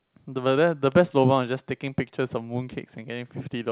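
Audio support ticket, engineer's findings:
Clock drift between sender and receiver: sender clock about 2% slow, jitter buffer draining throughout. Waveform shows small uneven seams where the receiver pads to stay in step.

Repeated timing corrections, 0.31 to 3.64 s: playout held at 98% speed, short repeated pieces adding roughly 70 ms total. Spectrogram shows duplicated slivers at irregular spacing. Hard 4 kHz ceiling from the G.711 A-law call path.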